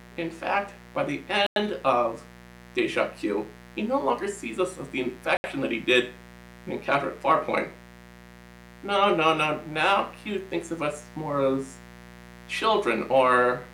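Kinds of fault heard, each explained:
Mains buzz: A steady, raspy buzz runs under the whole clip at about 20 dB below the signal. It is locked to the 60 Hz mains. Sharp switching spikes from the supply side enter the audio path twice per cycle, 120 times a second. That produces a dense series of 60 Hz harmonics instead of a pure hum, which gives the buzz its rough, edgy texture instead of a smooth low tone.
Bluetooth stall: The audio cuts abruptly to silence twice, for 97 ms from 1.47 to 1.56 s and for 71 ms from 5.37 to 5.44 s, then resumes. The likely cause is a wireless link stall. Interference delays packets, the receiving buffer empties, and playback halts until retransmitted data arrives. Each gap has hard edges with no fade, consistent with an empty buffer instead of a level change.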